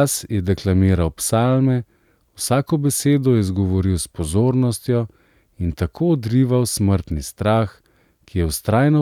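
Listening closely to the speech, nothing stood out as a technical problem at any point.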